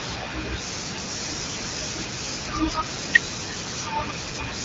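No technical faults can be heard anywhere in the speech.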